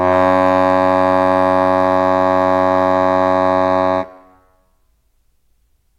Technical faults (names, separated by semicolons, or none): hard clipping